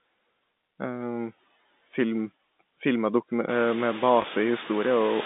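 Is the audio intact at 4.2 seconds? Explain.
No. Just after "filmer dokume med", from 4.22 to 4.24 s, there is packet loss with the last packet repeated. About 20 ms of audio went missing, which fits a single lost packet, and the receiver replayed the previous packet. A single repeat like this sounds like a small blip. Noise suppressor artifacts are also present here. Steady noise is pulled down by about 16 dB.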